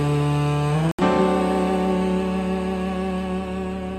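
At 0.91 s the sound drops to silence and returns at 0.99 s, leaving a hole of roughly 75 ms. This is a digital broadcast dropout: the receiver lost or rejected corrupted frames, muting until valid ones arrived. The gap fits about three missing frames.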